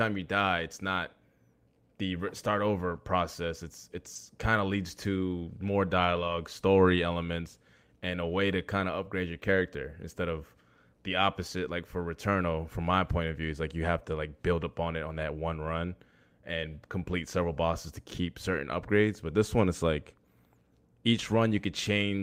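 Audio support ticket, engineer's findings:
Brief rough, noisier patches, no dropouts, at 2.91–2.97 s, 4.15 s, 6.15–6.33 s and 17.11–17.13 s. Lost packets rebuilt from error correction: Opus in-band FEC playing low-bitrate copies carried in following packets.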